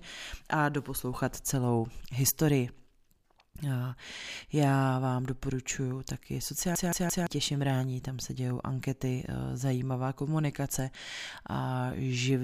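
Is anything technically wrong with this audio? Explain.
Yes. From 6.75 to 7.27 s the speech gets a CD stuck on one turn. A scratch keeps throwing the laser back one track. The same 0.17 s slice repeats three times, each jump cut by a brief mute. It sounds like a fast, even stutter.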